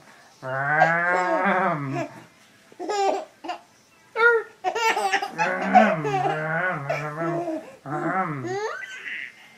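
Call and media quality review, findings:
No audible faults found in this recording.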